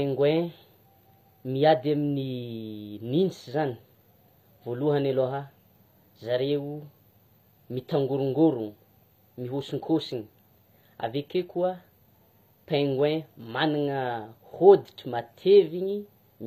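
From start to finish, the treble in this speech sounds synthetic: s sounds come out gritty and lispy, and nothing reaches above about 15.4 kHz. That's likely HE-AAC compression, rebuilding the top end from copied lower bands, consistent with a bitrate around 24 kbps.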